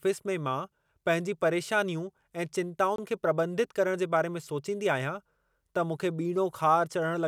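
At 2.96 s the speech drops out to silence for about 23 ms, ending at 2.98 s, then carries on. It's likely a Bluetooth stall: interference delayed packets, the headphones' buffer ran empty, and playback paused briefly until resent data arrived.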